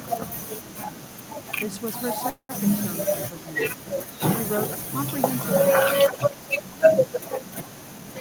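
A speech recording with two faults. Packets were likely held up in transit, so the jitter buffer ran dry and caused a call audio freeze from 2.29 to 2.66 s. The receiver stretched the last sound for about 198 ms, then went silent for about 70 ms. The speech resumes where it stopped, with nothing lost but everything after it arriving 198 ms later. An echo leak, likely from a far-end loudspeaker whose echo canceller let some of its microphone pickup through, sends a delayed copy of the speech back 326 ms late. It appears faintly at 4.52–4.83 s and more strongly at 5.89–6.39 s and 6.56–6.62 s.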